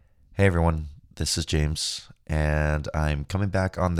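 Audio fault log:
No faults detected.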